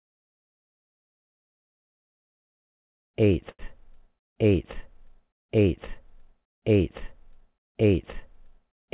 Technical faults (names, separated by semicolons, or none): short stall from a late packet